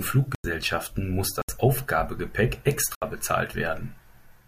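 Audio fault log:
0.35 to 3.02 s, block of digital silence: the speech drops to silence three times, at 0.35 to 0.44 s (93 ms), 1.42 to 1.49 s (70 ms) and 2.95 to 3.02 s (70 ms). The first gap fits a 4096-sample output buffer that was not filled in time, and the shorter two fit a smaller buffer at the same rate. There is no fade into or out of each gap, and the gaps themselves are heard as short holes.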